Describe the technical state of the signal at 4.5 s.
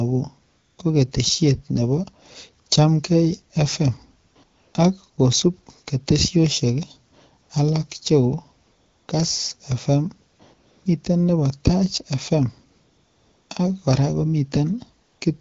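AMR comfort noise covers 4.43 to 4.73 s, a 300 ms stretch around 4.5 s. The sending phone judged the talker silent and stopped transmitting speech frames, so the receiver generated its own noise from a rough description of the background's level and spectral shape. The real background is replaced by a smooth, steady synthetic hiss that switches in at 4.43 s and back out at 4.73 s, where transmitted sound resumes.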